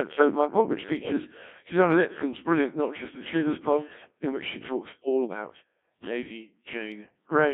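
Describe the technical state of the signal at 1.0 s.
Bit errors on digital voice radio cover 0.97 to 1.12 s, just after "of my pod which". Corrupted bits reached the vocoder's parameter stream, which fits a bit error rate of several percent across about three frames. Each bit in such a stream sets the pitch, level, voicing or spectral shape of an entire frame, so the resynthesised voice lurches in pitch and loudness and changes tone colour abruptly. For that short stretch it breaks into warbling, bleepy robotic gibberish.

Underneath, the Codec 2 vocoder is active at that moment as it is for the whole clip. Its damage is heavy, and the sound points to a rate around 1.3 kbit/s. Only pitch, voicing, energy and a coarse spectral envelope survive, and the decoder rebuilds the voice from sine waves rather than the original waveform. The result is buzzy and robotic, confined to a band of about 200 Hz to 3.6 kHz.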